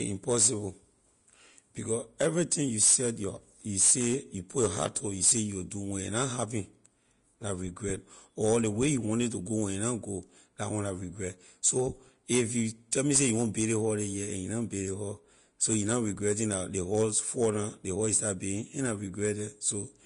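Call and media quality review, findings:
Likely Vorbis compression at low quality, consistent with around 36 kbps: coarse treble quantisation, nothing above 10.5 kHz. Speech sounds hissy and grainy throughout, with dulled top end.

Pre-echo at 12.91 s, after "regret so if you", before "me say you want": block-spread quantisation noise precedes the attack, adding a 10 ms hiss and softening it.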